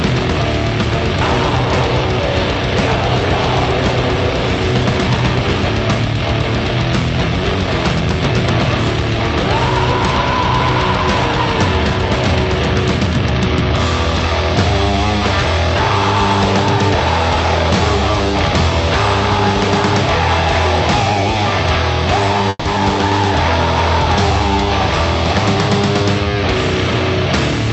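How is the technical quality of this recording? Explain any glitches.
The recording has two brief glitches close together, both around 22.5 seconds, against a call-path sound whose content stops at 8 kHz, consistent with a call codec such as Opus at a moderate bitrate.

Call audio freeze, 22.49 to 22.67 s: the last sound is stretched into a fading buzz for about 160 ms, ending in silence, likely because late packets drained the jitter buffer. On a spectrogram it shows as smeared horizontal bands.

Skip ahead, 22.75 s: around 70 ms of audio is dropped and the two sides are spliced almost directly, appearing as an abrupt discontinuity in the waveform.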